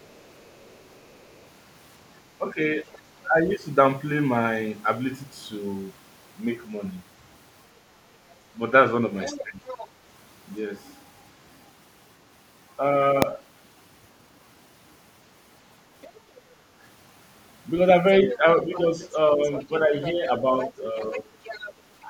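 Other side's voice leaking through, from 0.0 to 1.45 s: a faint second voice sits about 35 dB under the speech. This is likely a loudspeaker echo that the echo canceller did not fully remove from the microphone signal.

Speech suppressed in double talk, between 2.38 and 3.34 s: the main voice dips by about 10 dB in pieces adding up to roughly a fifth of a second. Both sides were likely talking at once, so the canceller turned down everything. Inside that span, at 2.92 to 2.98 s, a short scrap of the other side leaks through about 30 dB down.

From 9.22 to 9.88 s the leaking voice is much stronger, about 15 dB below the speech. Between 9.42 and 9.6 s the main voice is again pulled down by about 10 dB, likely as the two overlap.

Invalid numbers at full scale, at 13.22 s: a single hard bang. A calculation produced invalid values that were pushed to the maximum sample level for a block well under a millisecond long, which fits a 32-sample block.

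At 16.02 to 16.2 s a brief scrap of the other side leaks through about 25 dB down.

From 18.26 to 21.74 s the other side's voice is present, about 15 dB below the speech. From 18.38 s to the end, the main voice repeatedly dips by about 10 dB, for roughly a second in total, likely as the canceller suppresses the double talk.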